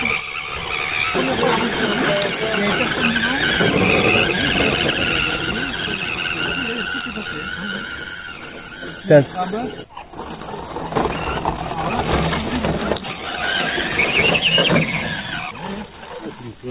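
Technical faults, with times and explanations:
Nothing stood out on listening.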